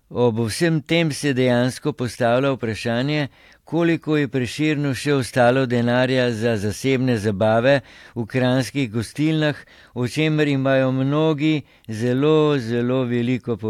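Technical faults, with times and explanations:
No technical faults are audible.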